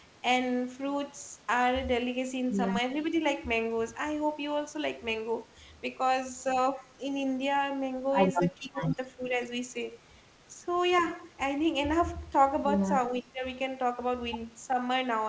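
From 8.58 to 8.98 s, 9.17 to 9.34 s and 13.21 to 13.44 s the speech dips. The first and last drops are deep, the middle one slight. This is speech suppressed in double talk. The likely cause is an echo canceller turning the talker down while the other side spoke.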